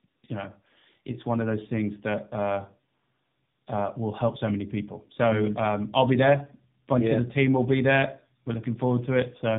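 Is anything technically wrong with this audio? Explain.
Yes. Tandem speech coding affects the whole clip. The speech seems to have passed through two narrowband coders in a row, likely AMR stages joined by a G.711 link. The second coder works on the first one's damaged output, so the artefacts stack. Nothing is heard above 3.7 kHz. The speech sounds muffled, rough and warbly.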